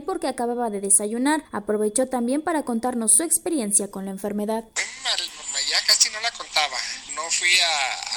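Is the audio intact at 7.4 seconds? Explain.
Yes, the audio is intact at 7.4 seconds, with no dropout, click, distortion or other fault audible at that point.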